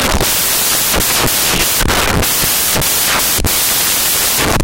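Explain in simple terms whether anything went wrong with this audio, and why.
Something went wrong for the whole clip, from start to finish. The fault is samples built from the wrong bytes. Each sound value in digital audio is stored in several bytes. Here they were put together wrongly, as if shifted by one byte or swapped. The tiny, fast-flickering details ended up as the biggest part of each value. So the speech comes with loud, harsh hiss, close to white noise on the louder sounds.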